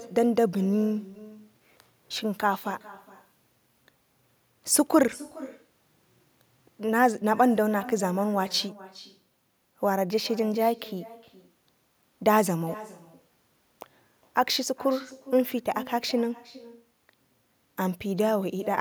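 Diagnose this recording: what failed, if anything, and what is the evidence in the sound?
The failure is in call processing: echo with no canceller. From start to finish, every phrase is followed by a second, fainter copy. It arrives roughly 0.4 s later and sits about 20 dB below the direct speech. The copy sounds thin. The far end is playing the call through a loudspeaker. Its microphone picks that sound up again and sends it back across the network. No echo canceller removes it before it returns.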